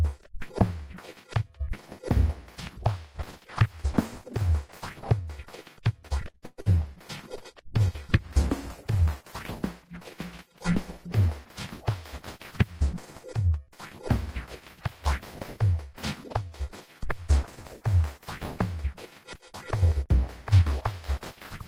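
From 6.07 to 6.69 s there is repeated packet loss, heard as robotic sound. Five holes open in quick succession, the longest about 114 ms. Each is patched by stretching the last bit of audio, and some pieces vanish outright. Concealment covers roughly 43% of that stretch. The stuttering, broken rhythm is what marks this as loss rather than a coding problem.

Overlapping the end of that burst, a call bitrate drop runs from 6.49 to 9.65 s. The sound turns rough and watery, with the top end dulled, which points to the encoder being squeezed from around 48 kbps to around 17 kbps and held there for about 3.1 s. Unlike the packet loss, nothing drops out. The sound stays continuous but coarser throughout, then regains its clarity once the rate recovers.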